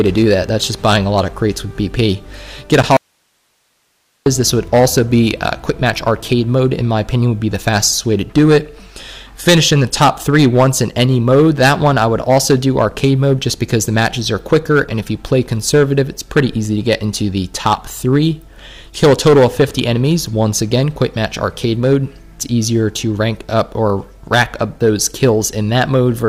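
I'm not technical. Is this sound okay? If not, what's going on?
No. Hard clipping runs through the whole clip. The sound was pushed well past the loudest level the recording chain could carry, so the tops of the biggest peaks were sliced off flat. Only a small share of the sound is affected at any moment, but those flattened peaks add a gritty, buzzy edge wherever the sound gets loud, like a speaker being driven too hard.

A gap at a join of encoded pieces comes at 2.83 s. The recording seems to have been saved in separate chunks and stuck back together without trimming the bit of silence that the saving process leaves at each chunk's edges. You hear a tiny hole, about 11 milliseconds long, with softened edges, and then the sound picks up exactly where it left off.

An audio dropout to a faint residue follows from 2.97 s to 4.26 s, lasting about 1.3 seconds. The sound suddenly vanishes and leaves only a soft hiss, then snaps back just as abruptly. 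It isn't a natural pause or a fade. The hiss in the gap shows that the equipment after the break kept running and only the sound feeding it was cut off, likely by a brief interruption in the incoming signal.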